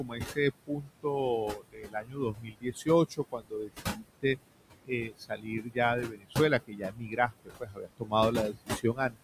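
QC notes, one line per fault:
Throughout, noise suppressor artifacts: the suppressor lowers room noise, about 10 dB below speech, by about 21 dB, frame by frame. The remaining noise sinks between the words and rises under them.
0.00–0.38, 0.67–1.05, 1.54–2.88, 3.09–4.05, 4.85–5.78, 6.03–6.36, 6.67–8.13 and 8.51–9.18 s, speech cut by the noise suppressor: the suppressor mistakes quiet speech for noise. It drops parts by about 15 to 21 dB, so they sound swallowed and faint.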